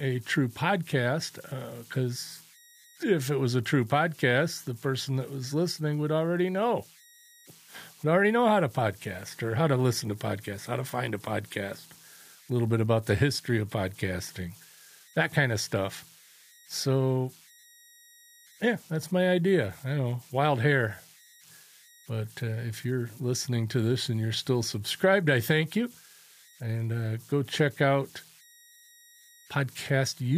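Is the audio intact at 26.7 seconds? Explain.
No, a whistle near 2 kHz and grainy noise sit about 29 dB below the speech throughout: converter idle tones from an undithered delta-sigma converter cycling on small inputs.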